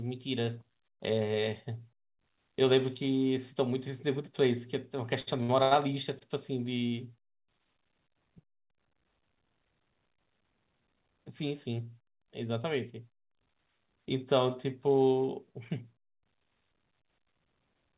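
Speech passing through a narrowband call codec, with everything above 4 kHz gone in a way that fits G.711 A-law at 64 kbps, has four short stalls from late packets, at 5.20–5.29 s, 5.43–5.51 s, 5.63–5.73 s and 6.19–6.23 s. Each time the jitter buffer ran dry, so the last sound is held for about 17 to 82 ms with a slight buzz or dip, then resumes where it left off. Nothing is skipped, which separates these stalls from a packet-loss gap. From 16.74 to 17.56 s a jitter buffer speed-up trims roughly 70 ms by cutting out whole pitch periods. The speech runs about 9% fast and sounds hurried, but its pitch does not rise, which rules out a resampling error.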